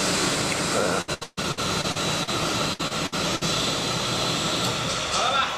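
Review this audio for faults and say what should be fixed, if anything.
Repeated packet loss (robotic sound) occurs from 1.01 to 2.29 s and again from 2.73 to 3.43 s. In each stretch the stream keeps dropping out, and each hole is filled by stretching the last received sound. That gives a choppy texture, with about a third of the first span and about 29% of the second concealed. The longest holes are 139 ms and 59 ms. On a spectrogram the patches show as frozen, smeared columns, and in the waveform as short repeated cycles between intact segments. To prevent it, strengthen the network path and add forward error correction or a larger jitter buffer.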